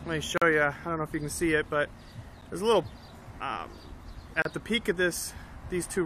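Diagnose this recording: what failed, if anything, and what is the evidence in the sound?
The fault sits at the streaming and playback stage: a gap between stream segments. Hard-edged silences interrupt the sound at 0.38 to 0.42 s, at 2.41 s and at 4.42 to 4.45 s, spaced about 2 s apart to match the segment length. Each segment's time stamp starts slightly after the previous one ends, so the player pads the difference with silence, adding 41, 10 and 32 ms. On a waveform these appear as flat silent stretches with abrupt edges, and on a spectrogram as narrow, empty vertical strips across all frequencies. No audio is lost.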